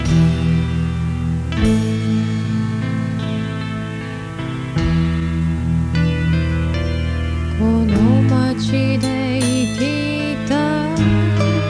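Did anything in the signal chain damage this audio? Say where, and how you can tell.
No, nothing in the signal chain damaged this audio.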